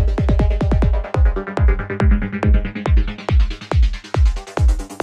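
No technical faults can be heard anywhere in this recording of everyday sounds; the signal stays continuous and intact throughout.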